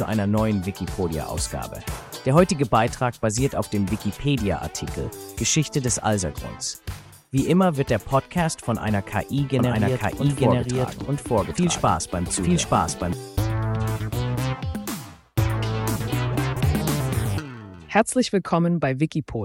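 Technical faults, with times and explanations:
9.59 to 13.13 s, doubled audio track: a slower second capture path or an out-of-step edit likely mixes the audio in twice, so a full-band copy about as loud as the original trails it by roughly a second, cutting in and out abruptly without decay.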